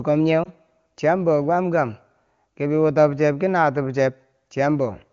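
At 0.43 s, lost AMR speech frames cause a brief dip or warble lasting about 0.05 s, consistent with one corrupted 20 ms frame. The decoder patched the gap from the previous frame's pitch and spectral shape with reduced gain, and the AMR wideband (HD Voice) codec around it sounds clean.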